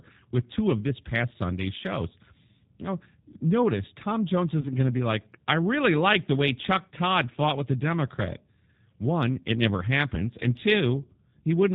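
From start to finish the speech sounds slightly rough and synthetic, with a buzzy, processed edge and nothing audible above 4 kHz, so sibilants and breath lose their crispness while the words stay intelligible. This is G.729 codec damage, plainly audible here and consistent with the G.729A variant at a rate that fits an 8 kbit/s stream. The coder rebuilds each 10 ms frame from a vocal tract filter, a pitch predictor and a handful of pulses, discarding the finer detail.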